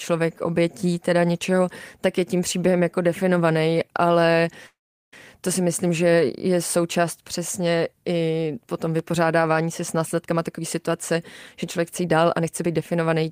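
From 4.66 to 5.14 s the speech halts: the last sound trails briefly as a fading buzz or hiss, then about 0.39 s of near silence, before resuming intact at "to si". This call audio freeze likely came from delayed packets emptying the jitter buffer, inserting roughly 0.46 s of gap without losing content.

At 8.99–9.01 s, right after "součást přesně i potom", a single sharp loud pop rises about 5 dB above the speech, which carries on beneath it. A sudden voltage step or pulse, likely from a switch, static or a driver glitch, was added to the signal.

From 10.26 to 11.17 s, after "se s", the speech sounds hurried at unchanged pitch, running at 113% speed, and again from 11.63 to 13.24 s at 117%. This is jitter buffer speed-up: the receiver trimmed short pitch-period slices to shed excess buffered delay, about a tenth of a second in the first stretch and about 0.3 s in the second.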